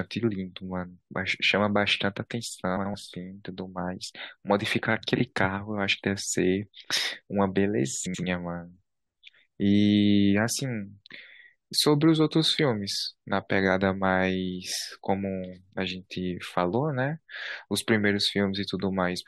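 Frames out of order at 2.77–2.95 s, 5.16–5.21 s and 8.06–8.24 s: two neighbouring runs of frames, about 85 ms each (21 ms at 5.16 s), were decoded in swapped order. Each stretch plays as a garbled flutter, without losing any time.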